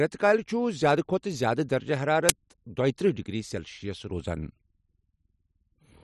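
At 2.29 s the speech is broken by an uninitialised buffer: a single 10 ms block was sent to the output before any audio had been written into it, so whatever stale data sat in that memory was played as if it were samples. It comes through as a brief, loud crack of digital noise. On the waveform it shows as a narrow slab of large, disordered values; a spectrogram shows a thin vertical band of energy spanning the frequency range.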